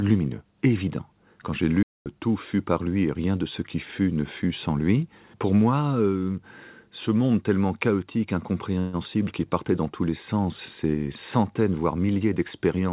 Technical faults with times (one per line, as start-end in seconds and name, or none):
1.83-2.06 playback stall
8.79-8.96 call audio freeze